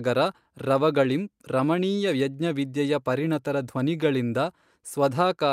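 Speech recording with no technical faults to report.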